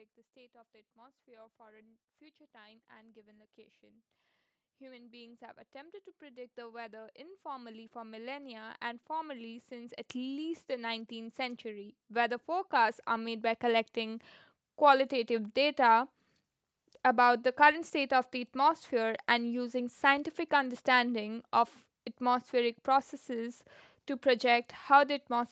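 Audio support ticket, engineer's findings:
Automatic gain rising, twice: small lift 2.52–4.1 s (about 3 dB), then a long slow climb 4.78–14.25 s (about 19 dB). Voice and background swell together. AGC in the call mic chain reading input as too quiet and ramping gain. Band tops out near 8 kHz, consistent with the Opus call path.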